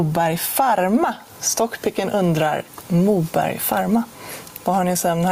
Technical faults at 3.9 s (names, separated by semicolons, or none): gain pumping